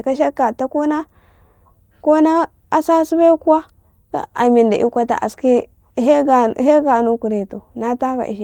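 A speech recording in which, from 4.18 s to 6.23 s, the sound turns rougher and more watery before clearing again. That is a call bitrate drop: the call's bandwidth estimate fell, so the encoder was told to work with far fewer bits, going from 32 kbps down to 17 kbps and staying at that floor for nearly 2 seconds. With roughly half the bits, the codec has to quantise the signal much more coarsely, which smears detail and produces the degraded texture until the bitrate recovers.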